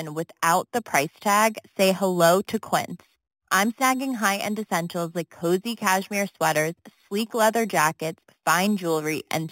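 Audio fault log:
throughout: imaging from sample-and-hold upsampling. The speech was raised to a higher rate by repeating each sample rather than passing it through a smoothing filter, which fits a move from 8 kHz up to 48 kHz. Mirrored copies of the spectrum are left standing above the original band. The first fills 4 kHz to 8 kHz at about 13 dB below the speech and gives a bright metallic fizz that rises and falls with the voice.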